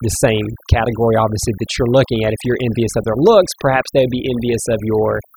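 Overdone noise removal runs through the whole clip. The noise reduction was set too aggressively: frequency bands close to the estimated noise floor are cut hard, taking low-level parts of the speech with them. Pauses drop to near silence with twinkling artefacts.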